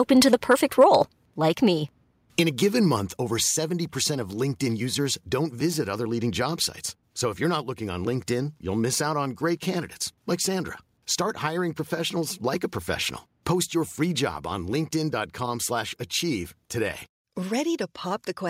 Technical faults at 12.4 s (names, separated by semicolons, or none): none